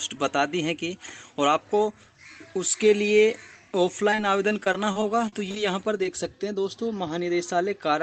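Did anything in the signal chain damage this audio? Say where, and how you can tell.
Yes. Repeated packet loss (robotic sound) at the network stage, from 4.10 to 5.57 s. Short gaps follow each other closely, the longest about 33 ms, and about 13% of the span is filled in. The receiver keeps extending the last sound over each hole, giving a choppy texture with pieces missing.

Short concealed packet loss, also network-side, at 5.98 s and again at 6.04 s. Each hole is only 10 ms. The decoder bridges it by continuing the preceding sound, then blends back. You hear a brief smear or wobble rather than a dropout, through the Opus call path's 8 kHz-limited audio.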